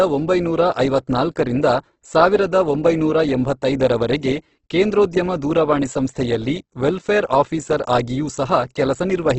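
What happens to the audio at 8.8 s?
The encoder was likely starved of bits, leaving heavy Opus compression that runs through the whole clip and is still present at 8.8 s. The damage fits a low bitrate around 12 kbps in the codec's music mode at wideband. There is nothing above about 8.2 kHz, so the speech sounds dull, and thinly coded bands refilled with noise or folded copies make it rough and grainy.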